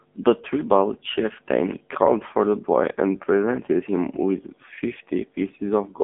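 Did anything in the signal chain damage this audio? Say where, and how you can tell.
Yes, codec stage: AMR narrowband mobile codec throughout. The spectrogram is empty above 3.6 kHz, and its few-pulse vocal-tract model makes speech buzzy, pointing to roughly 6.7 kbps.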